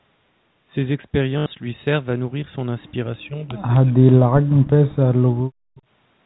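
Speech, with two faults. Packet loss with the last packet repeated at 1.38 to 1.46 s: about 80 ms went missing, which fits four 20 ms packets, and the receiver replayed the last one, giving a brief buzzy, robotic stutter. Between 3.16 and 4.81 s, speech is suppressed in double talk, likely because the echo canceller could not separate this side's talker from the far-end echo on the loudspeaker. It pulls the level down in pieces totalling around one and a half seconds, dropping by roughly 40 dB at its deepest.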